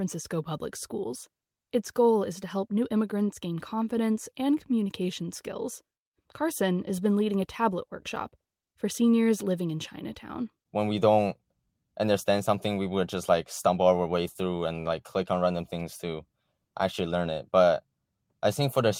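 A recording of speech in which no technical fault can be heard. There is nothing in it that needs a time or a cause.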